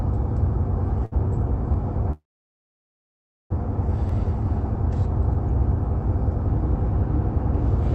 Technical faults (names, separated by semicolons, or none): short stall from a late packet; call audio freeze